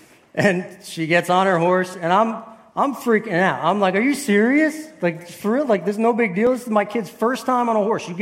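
At 1.94 s the audio jumps as a short stretch, around 20 ms, vanishes, and at 6.47 s there is a briefer skip of only a few milliseconds. Both are likely a dropped buffer (overrun), where incoming samples were overwritten before being read and the surrounding audio was spliced together. Unlike a dropout, no silent gap opens; the sound simply lurches forward at the join.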